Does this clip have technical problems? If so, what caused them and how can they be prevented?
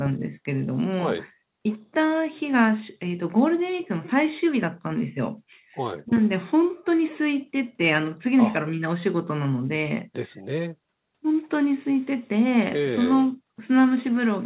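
No, there's nothing wrong here; the sound just tops out around 4 kHz, which is normal for a call line and fits a G.711 mu-law codec, so there's nothing to prevent.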